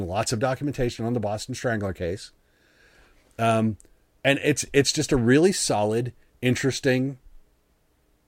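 No technical faults found anywhere in the recording.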